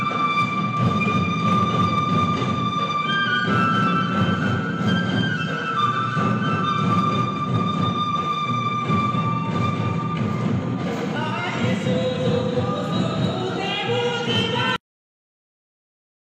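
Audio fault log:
2.44–2.51 s, AAC frame loss with concealment: one frame of about 43 ms went missing, and the decoder covered the gap by rebuilding it from the last good spectrum, either with scrambled signs or with interpolated energy. The result is a brief smeared, noisy or phasey patch rather than a gap. Unlike a plain dropout there is no silence, and unlike a click there is no sharp edge. The sound keeps going but briefly loses its definition.
14.76 s to end, cut-off end: the audio stops in the middle of a sound and drops straight to silence with no decay, and it stays silent until the file ends. This happens when the final buffers were never written or played, so the tail of the signal simply isn't there. A fade-out or a natural ending would tail away, but here the level falls away at once, in the middle of a sound.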